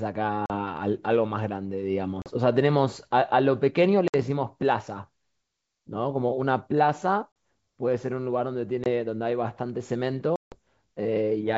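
Packet loss on an ADPCM call cuts hard-edged silent holes into the speech at 0.46, 2.22, 4.08, 7.32, 8.84 and 10.36 s. Three gaps last 40 ms, the one at 4.08 s 60 ms, the one at 8.84 s 20 ms, and the one at 10.36 s 160 ms, which points to several packets lost in a row. Unlike a plain dropout, each hole is followed by slightly distorted speech for some tens of milliseconds, because the decoder's predictor and step size have lost step with the sender's. The G.722 wideband sound stays clear to 7 kHz.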